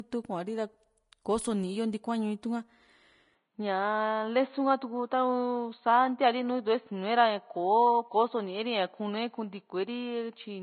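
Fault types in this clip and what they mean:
Vorbis compression: The whole clip has plainly audible codec damage, likely from a low-rate Vorbis encode, roughly in the 25 kbps region. Nothing survives above 10.5 kHz, and the treble that's left turns grainy and hissy because fine detail was quantised into noise.
Input switched to a poorer device: At 3.35 s the speech abruptly goes dull and boxy with no gap, likely a switch to a worse microphone or headset profile. From there to the end nothing gets through above 4.3 kHz, a faint new noise floor appears, and the level barely changes.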